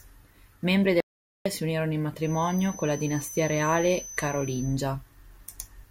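The input to this speech recording was likely lost for a moment, through a dropped connection or a stray mute, while the recorder kept writing silence. The result is an audio dropout to silence from 1.00 to 1.46 s. For about 450 ms the speech is cut off mid-flow and replaced by dead silence with no room tone, and it resumes just as abruptly. Whatever was said in that gap is missing. Later, the loudspeaker-to-microphone loop was likely hovering right at the edge of feedback, so one frequency kept ringing without building into a howl. This produces a feedback whistle from 2.17 to 4.81 s, a thin, steady tone at 6.1 kHz sitting roughly 15 dB below the speech. It swells and fades slowly in level and runs behind the voice for more than two and a half seconds before it disappears.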